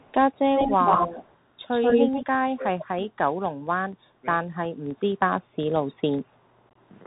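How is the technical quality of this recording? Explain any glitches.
Pretty rough, honestly. It's narrowband headset audio with several stretches of echo, a couple of dropouts, and a burst of packet loss near the end.

Bluetooth CVSD headset codec, whole clip: everything above 4 kHz is gone, s sounds are scratchy, and there's a grainy hiss underneath. That's the one-bit up/down delta coding you'd expect from a 64 kbps CVSD link.

Echo leak, first at 0.0–0.14 s and 0.34–0.39 s: a faint delayed copy trails about 198 ms behind, way down in level. Then at 0.56–1.37 s and 1.71–2.26 s it comes back about 138 ms behind, roughly as loud as the speech or even louder. There's one last quieter scrap at 2.79–2.85 s. Likely a far-end speakerphone whose echo canceller let its own pickup through.

Speech suppressed in double talk, 2.43–2.66 s and 2.87–3.19 s: the speech sinks by around 30 dB, nearly vanishing. 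That's likely the canceller clamping down while both sides overlapped.

Unconcealed Bluetooth headset packet loss, 6.69–6.75 s: about 38 ms is missing, scattered over 60 ms, with the longest hole about 22 ms. You hear abrupt gaps, consistent with a handful of lost headset packets.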